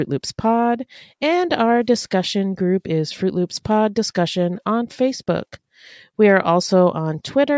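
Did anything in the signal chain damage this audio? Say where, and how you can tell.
No, nothing in this speech recording stood out as damage from any stage of the signal chain on listening.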